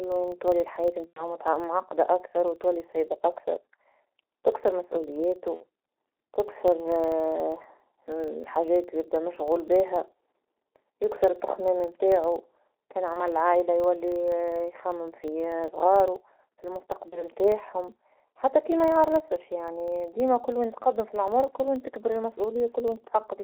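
From the start this speech sounds muffled and hoarse, squeezed into roughly 300 Hz to 3.5 kHz with smeared consonants, typical of heavy G.723.1 coding at about 6.3 kbit/s. Underneath sits a 25 Hz buzz that follows the level of the speech, a filter restarted on every block, ticking at each block edge. Packet loss concealed by the speech codec turns up at 1.08–1.36 s after "تولي حياة", at 5.54–5.64 s after "تكثر مسؤولياتو", at 13.13–13.26 s, and at 17.10–17.22 s after "في صغارو في". Each time the decoder stretches the last sound into a fading buzzy tone or coloured noise, and the audio stays weak briefly afterward.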